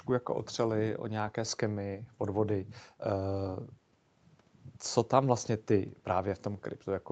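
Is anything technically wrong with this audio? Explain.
No, nothing's wrong here; the speech has been through an ordinary call microphone and WebRTC call path, so the top end stops at about 8 kHz, which is just how such a call normally sounds.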